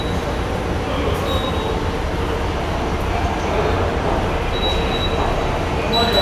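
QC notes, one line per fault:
No technical problems are evident in the signal.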